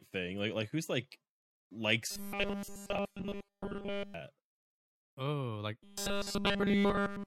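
From 2.11 to 4.14 s, after "like who's like likes", and again from 5.83 s to the end, the speech becomes a rigid 200 Hz metallic buzz: robotic sound, likely from a roughly 5 ms buffer repeated throughout.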